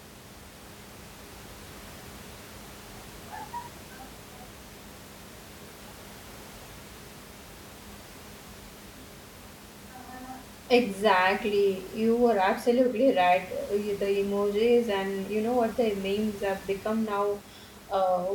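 Nothing stood out on listening to the speech, with only the room's own background noise sitting about 20 dB below the voice.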